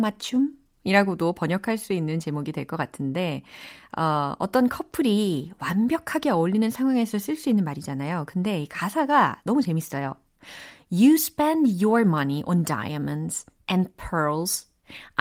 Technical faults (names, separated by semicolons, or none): none